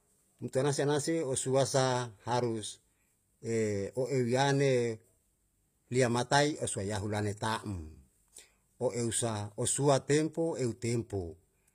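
From start to finish the speech carries HE-AAC compression damage, plainly audible, likely from a low bitrate around 24 kbps. The treble is rebuilt from copied lower bands rather than coded, so s sounds come out gritty and metallic, and nothing survives above 15.5 kHz.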